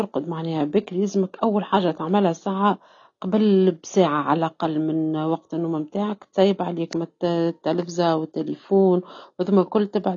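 From start to finish the speech is dull, with nothing above 7.8 kHz, and sibilants and sustained vowels carry a warbling, fizzy smear. This is likely AAC compression at a low bitrate, consistent with about 24 kbps. Unlike simple low-pass filtering, the coder also leaves holes in the spectrum or fills bands with substitute noise.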